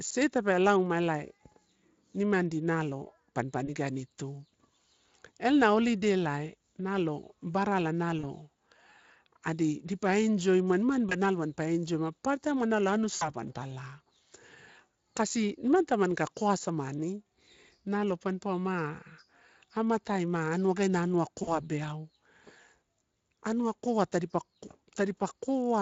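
VoIP packet loss concealed by the speech codec occurs at 3.65–3.70 s, just after "nalo barala" at 8.19–8.26 s, at 11.09–11.15 s, 13.15–13.30 s and 21.43–21.51 s. Each time, the decoder fills 20 to 60 ms of missing audio by stretching the preceding sound into a brief, fading buzzy tone or coloured noise, and the speech stays weak or smeared for a moment afterwards.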